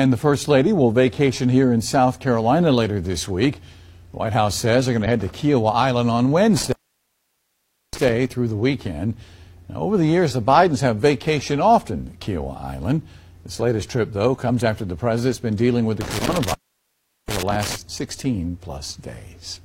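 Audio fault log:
5.02 to 5.07 s, damaged data in a compressed stream: a brief glitch as the decoder misreads corrupted frames, loses sync and jumps ahead to the next valid header.
6.57 to 8.09 s and 16.01 to 17.76 s, intermittent contact: a loose connection opens for 1.21 s and then 0.74 s, so the sound drops out, with crackle at each break and remake.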